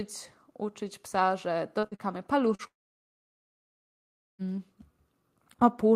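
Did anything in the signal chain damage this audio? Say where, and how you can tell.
Yes. The damage happened in the network stage: packets were lost on the way to the receiver, and the receiver had to cover the gaps. This speech clip shows three kinds of loss.

Short concealed packet loss occurs at 1.79–1.86 s, 1.95–2.02 s and 2.55–2.62 s. In each case about 40 ms of audio never arrived, and the decoder filled the gap for roughly 33–39 ms by extending the last sound before blending back in. You hear a brief smear or wobble where the real signal was replaced.

A burst of packet loss sits at 1.87–1.94 s, right between two of those short losses. About 40 ms is gone, and the concealment runs for about 47 ms: the last sound is held as a buzz or hiss and fades. When the audio resumes, the content in between is missing.

A long network dropout runs from 2.67 s to 4.42 s. It was likely caused by the stream stopping entirely. 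About 1.72 s of audio is missing. The end of the last received sound is carried briefly and fades away, leaving roughly 1.7 s of silence before the audio returns at 4.42 s, further along and with the lost portion never played.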